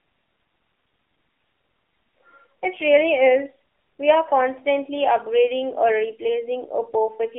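Speech carries AMR narrowband mobile codec damage throughout: band held to 250 Hz–3.5 kHz, plus a buzzy, synthetic texture that plain filtering wouldn't add, fitting a low 7.4 kbps mode.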